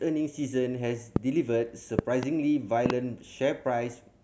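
Speech clip with loud pops riding over the talking: a single one at 1.16–1.18 s, then doubles at 1.99–2.25 s and 2.86–2.92 s, each jumping about 20 dB above the speech, likely from electrical transients such as a switch or connector glitch.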